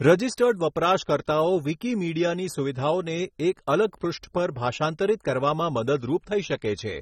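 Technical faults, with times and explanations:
Throughout, sample clock jitter: an unsteady converter clock, wandering by something like 7 microseconds, shifts each sample's timing, so errors track the waveform's slope. The result is a hiss about 30 dB below the speech that rises on loud, bright sounds and disappears in pauses. A spectrogram shows broadband haze only where energy sits.
Throughout, AAC compression: the speech sounds dull and smeared, with a plainly audible fizzy warble on sibilants. It likely comes from low-bitrate AAC-LC coding, consistent with roughly 24 kbps. A spectrogram shows a hard ceiling at 16.5 kHz.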